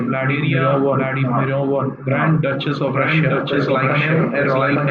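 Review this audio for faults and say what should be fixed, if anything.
A doubled audio track runs throughout, likely from the same signal being captured a second time through a slower path. The speech repeats about a second behind itself at roughly equal loudness, full-band and dry. Route each source through a single capture path and check the mix for duplicate inputs before recording.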